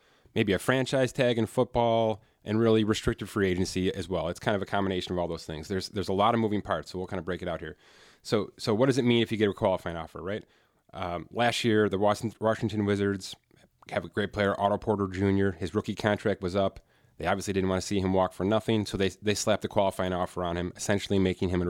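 No dropouts, clipping, glitches or other technical faults turn up anywhere in this speech recording.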